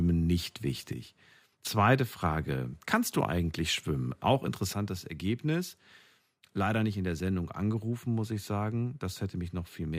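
Speech clip where the level drops abruptly by about 6 dB at 0.93–1.52 s and again from 4.74 s to the end, visible as step-downs in the waveform envelope, likely one channel dropping out.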